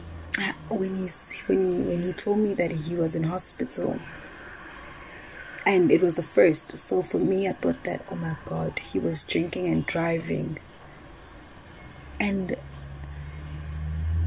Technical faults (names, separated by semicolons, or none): none